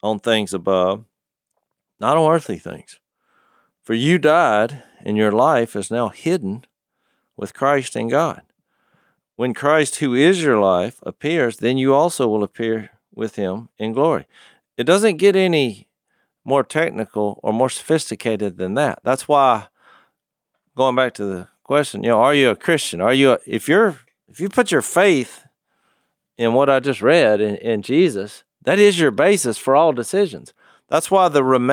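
Nothing in this recording of speech stands out as a technical fault anywhere along the way.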